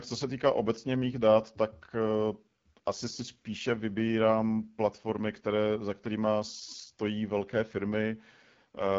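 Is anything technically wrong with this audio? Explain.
Yes. Throughout, the speech carries AMR wideband (HD Voice) codec damage. At a bitrate fitting its low 8.85 kbit/s mode, the pulse-driven vocal tract model sounds rough and raspy. Unlike narrowband telephone coding, content reaches about 7 kHz, with nothing above 7.5 kHz.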